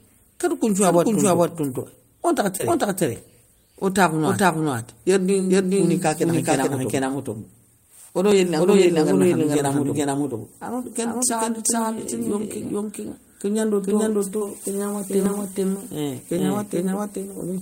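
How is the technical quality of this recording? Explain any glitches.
The recording has two problems: a doubled track running through the whole clip, and two brief concealed dropouts.

The doubled audio track is present throughout. A second, full-band copy of the speech trails the original by roughly 0.4 s at about the same level. Two out-of-step copies were likely mixed together, for example by a second, slower capture path. It sounds like a dry slapback with no room decay. On a spectrogram every syllable's pattern appears twice, shifted about 0.4 s along the time axis. The waveform shows matching envelope shapes at that spacing.

Short concealed packet loss occurs at 2.57 to 2.61 s and at 14.37 to 14.43 s. In each case a few hundredths of a second of audio arrived too late for the decoder, about 20 ms the first time and about 40 ms the second. The receiver patched each gap by extending the preceding sound, then blended back into real audio. 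Each one is heard as a brief smear or wobble. A spectrogram shows a short stretch of flattened, repeated harmonics or smooth noise where the detail should be.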